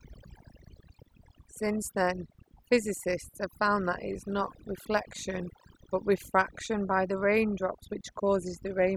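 Throughout, the background sinks to near silence with twinkling specks: overdone noise removal, switching off frequency bands near the noise estimate along with quiet speech detail.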